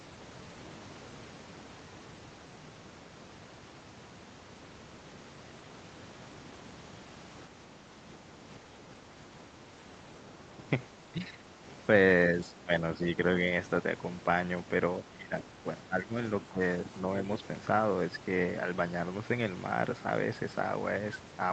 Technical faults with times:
7.49-8.30 speech suppressed in double talk
11.09-11.60 speech suppressed in double talk
12.45-13.05 speech suppressed in double talk
15.04-16.15 speech suppressed in double talk
16.46-16.92 speech suppressed in double talk

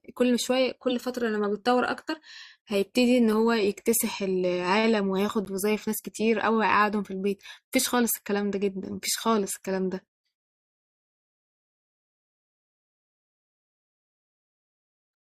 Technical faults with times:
0.90 corrupt frame decoded
5.45-5.47 corrupt frame decoded

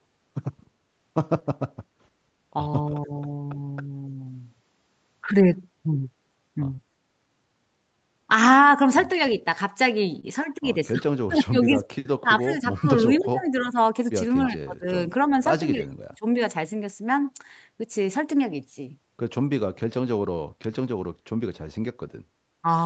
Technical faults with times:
1.39-1.43 short concealed packet loss
2.90-3.12 speech suppressed in double talk
6.75-6.80 short concealed packet loss
10.20-10.25 short concealed packet loss
10.93-13.77 speech suppressed in double talk
12.77-13.23 echo leak
14.49-16.26 speech suppressed in double talk
15.81-15.86 echo leak

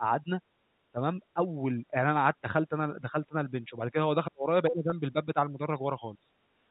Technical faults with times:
0.00-0.30 speech suppressed in double talk
0.92-2.09 speech suppressed in double talk
2.41-6.06 speech suppressed in double talk
4.90-4.92 packet loss with pitch repetition
6.45-6.71 background gated by the echo canceller

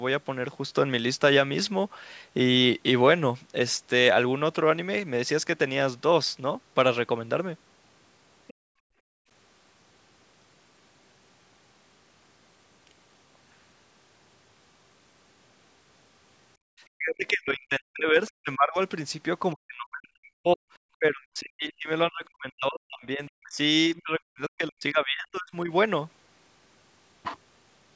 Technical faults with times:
8.47-8.54 other side's voice leaking through
8.54-9.29 background gated by the echo canceller
16.57-16.68 background gated by the echo canceller
16.96-18.78 speech suppressed in double talk
19.54-20.60 speech suppressed in double talk
20.98-23.58 speech suppressed in double talk
23.95-25.71 speech suppressed in double talk

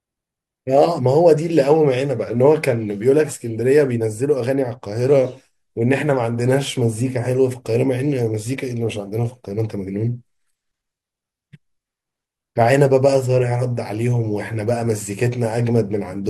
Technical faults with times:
none

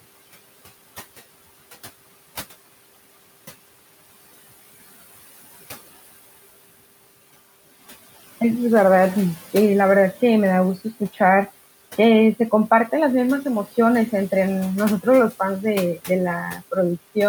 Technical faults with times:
0.00-17.28 noise suppressor artifacts

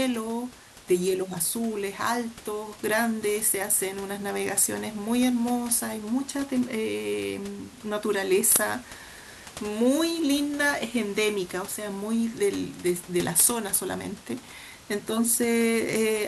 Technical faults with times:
none

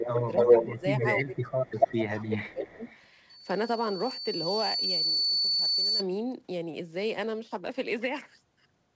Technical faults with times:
0.00-1.29 echo leak
0.05-0.83 speech suppressed in double talk
1.19-2.86 speech suppressed in double talk
1.67-3.00 echo leak
3.29-6.04 loudspeaker feedback squeal

